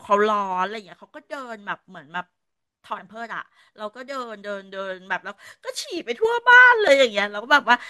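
Zipper noise, 0.46 to 0.93 s: the speech level drops by roughly 10 dB, but the gain moves in 3 dB jumps instead of a smooth ramp, at about seven steps a second. Each jump is an abrupt discontinuity in the waveform, so a faint ticking rides on the speech while it fades.

Damaged data in a compressed stream, 2.97 s: corrupted data makes the decoder misread a frame and lose sync. It skips ahead to the next valid frame header, which is heard as a brief glitch in the speech.

Zipper noise again, 5.83 to 6.76 s: the level now rises by roughly 10 dB in the same 3 dB steps, more slowly, about four a second.

Damaged data in a compressed stream, 6.88 s: another brief glitch from the same kind of lost frame sync.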